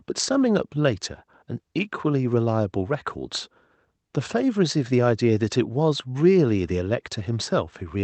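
No technical faults heard.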